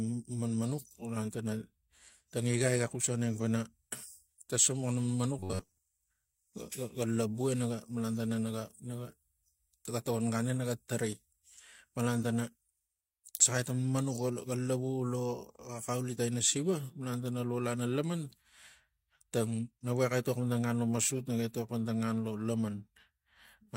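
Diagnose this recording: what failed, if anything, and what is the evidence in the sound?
Robotic sound from repeated short buffers, 5.39 to 5.78 s: a buffer likely looping 10.7 ms blocks forces a rigid 93.8 Hz buzz, seen as flat, evenly spaced spectrogram harmonics.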